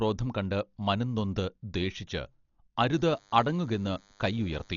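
Dolby Digital compression, present throughout the speech, is the likely cause of the dull, band-limited sound: nothing reaches above 7 kHz, and the coding damage is heavy. At a rate near 40 kbps the encoder cuts the bandwidth and leaves many frequency lines without mantissa bits, so the decoder fills those gaps with dither noise. That substituted noise shows up as a rough, fluttering grain clinging to the voiced tones.

DECT cordless phone buzz begins at 2.96 s and runs to the end of the clip at 4.76 s. A nearby DECT handset or base transmits a brief radio burst every 10 ms, and the audio circuitry rectifies each burst into a click. The clicks repeat at 100 Hz and merge into a steady, thin buzz rich in harmonics. It sits faintly under the speech, well below its level.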